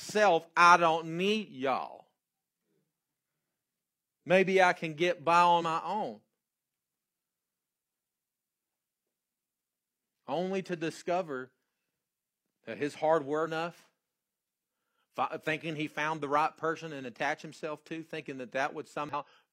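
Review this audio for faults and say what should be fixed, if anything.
Damaged data in a compressed stream shows up four times in this speech: a single disruption at 3.07 s, then 5.53 to 5.62 s between "I can get by" and "my own", 13.42 to 13.47 s after "that his hard", and 19.09 to 19.14 s. At each point the decoder met corrupted frames, misread or discarded them, lost sync and had to find the next valid frame header, which breaks the audio briefly. To prevent it, re-fetch or re-encode from a clean source and verify file or stream integrity with checksums before delivery.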